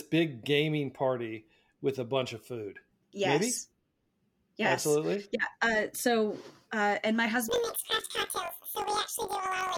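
Planar audio read as interleaved, from 7.48 s to the end: each 21.33 ms block plays twice at double speed, lifting the sound an octave with a 46.9 Hz flutter.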